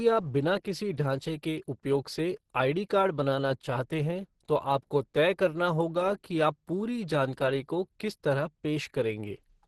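Speech clip with heavy Opus compression throughout: muffled, hoarse and grainy, likely from a hybrid-mode encode near 12 kbps, with the spectrogram showing nothing above 12.1 kHz.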